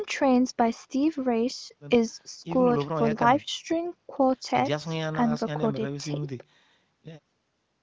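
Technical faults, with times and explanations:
No technical faults can be heard in this speech clip. It has the narrowed band of a call through HD Voice coding, with no sound above 8 kHz and little or no codec roughness.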